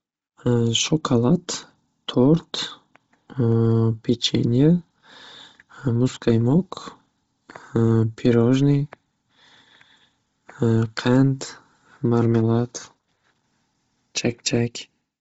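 Speech, and the whole thing has the sound of Bluetooth LC3 compression, most likely a Bluetooth LE Audio link. There's nothing above about 7.7 kHz, and the top of what's left is grainy and breathy, where the codec has thrown away upper spectrum and filled it back in with noise. The damage is heavy, which points to a low bitrate, something around 24 kbps, and the texture fits short 7.5 ms frames.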